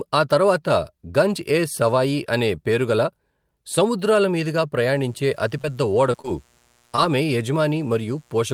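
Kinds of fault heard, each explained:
Mains buzz: a steady, raspy buzz sits under the speech from about 4.85 s to the end, low in level, roughly 40 dB below the talker. It is built on 60 Hz, with a dense ladder of harmonics climbing into the kilohertz range. Sharp switching spikes from something like a dimmer, a rectifier or an unshielded run entered the signal path twice per mains cycle, giving the edge its rasp.
Short concealed packet loss: four brief smears or wobbles interrupt the speech, at about 5.61 s, 6.12 s, 6.21 s and 6.96 s, each lasting a few hundredths of a second. In each case about 20 ms of the stream failed to reach the decoder in time. The receiver filled the gap by extending the preceding sound, 16 to 25 ms, then crossfaded back to the real signal, which can blur or swallow a short sound.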